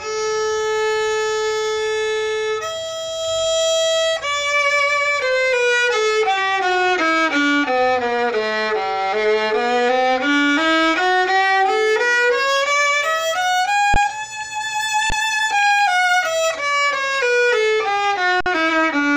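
At 13.94 to 13.96 s and 15.10 to 15.12 s, the sound freezes for 20 ms. At 18.41 to 18.46 s it freezes for about 55 ms. Each is an underrun with held sample. The output buffer emptied and the converter held its last value. The waveform sits flat without clicking. Playback then resumes where it stopped, so each gap ends softly.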